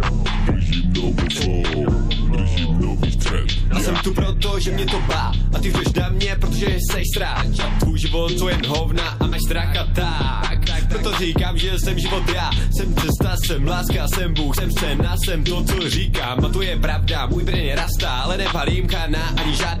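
The whole clip has a watery, swirly quality, with smeared attacks. That's plainly audible MP3 compression, likely from a low-bitrate encode around 64 kbps, where the encoder drops treble and thin detail to save bits. There are also two stretches of skipped compressed frames. At 9.32 s the sound jumps ahead by roughly 150 ms, and at 14.57 s by about 50 ms. Each jump is a short smeared blip rather than a hard click, which fits whole 26.1 ms frames going missing, about seven and then two.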